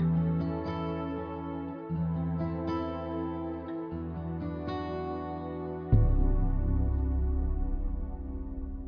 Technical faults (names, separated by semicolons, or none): none